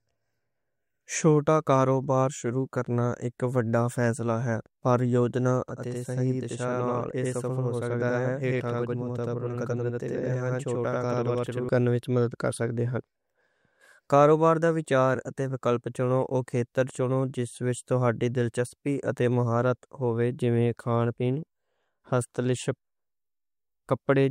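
Channel delay (doubling) runs from 5.69 to 11.69 s, ending just before "کرنے وچ مدد کر". One channel arrives about 85 ms late, which fits a 4096-sample buffer, and summing to mono adds a same-level second copy, heard as a tight slap echo.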